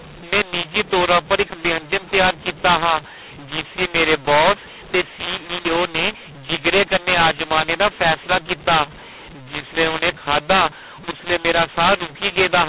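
From start to finish there's a mu-law and A-law mixup: the speech was coded as A-law but decoded as mu-law, so levels get scrambled. It comes across harsh and gritty, quiet moments lifted into a hiss, and it's confined to the 4 kHz telephone band.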